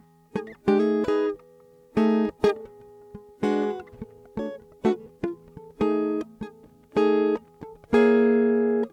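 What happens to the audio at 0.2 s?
Nothing goes wrong at 0.2 s: the music plays through that moment intact, with no dropout, click or other fault.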